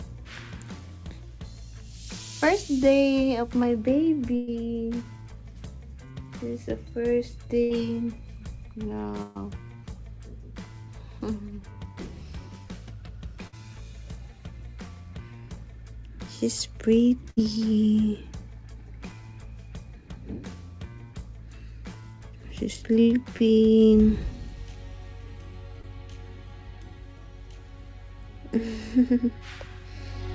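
Bursts of packet loss hit at 4.36 to 4.49, 7.63 to 7.72, 9.22 to 9.37, 13.47 to 13.54 and 17.30 to 17.39 s. Each time, 60 to 120 ms of audio never arrived. The receiver stretched the last sound into a fading buzz or hiss, then jumped ahead past the missing section.

Short concealed packet loss follows at 23.37 to 23.41 and 25.81 to 25.85 s. About 20 ms went missing each time and was patched by extending the preceding sound, heard as a brief smear or wobble. Throughout, the call path's codec leaves nothing above 8 kHz, which fits G.722 at 64 kbps.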